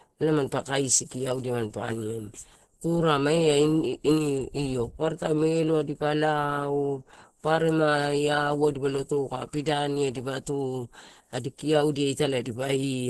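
Throughout the speech, the sound is muffled and hoarse, with a grainy, rough texture and nothing above 12.1 kHz. This is heavy Opus compression damage, likely from the encoder's hybrid speech mode at a starved rate consistent with about 12 kbps.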